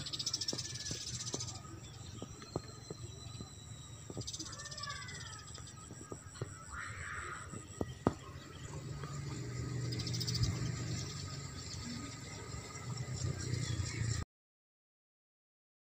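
The final buffers were never written or played back, producing a cut-off end at 14.23 s. The audio stops abruptly mid-sound, with no natural decay, and drops straight to digital silence that holds for the remaining 1.7 s.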